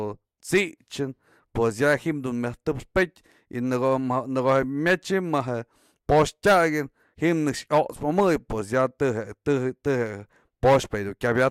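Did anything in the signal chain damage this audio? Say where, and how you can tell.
No, nothing along the chain has left a mark on this speech recording that I can hear, so there's no stage to point to.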